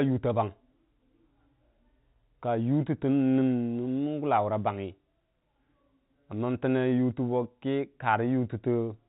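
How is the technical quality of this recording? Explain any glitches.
No glitches can be heard anywhere in the recording.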